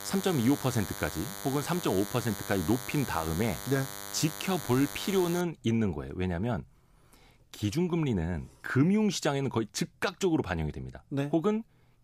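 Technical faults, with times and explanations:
0.0 to 5.41 s, DECT cordless phone buzz: a thin, steady buzz sits under the speech, fairly prominent at roughly 10 dB below it, then stops. A nearby DECT handset or base station transmits a brief radio burst every 10 ms, and the audio circuitry rectifies each burst into a click, giving a 100 Hz repetition rich in harmonics. On a spectrogram this appears as a comb of evenly spaced horizontal lines at multiples of 100 Hz; the waveform shows regular spikes 10 ms apart.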